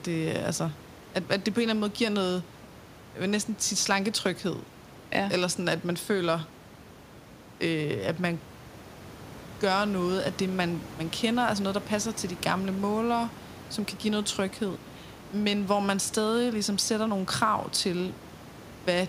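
There are no technical faults in this speech to describe in time order, only ordinary room noise about 19 dB below the talker.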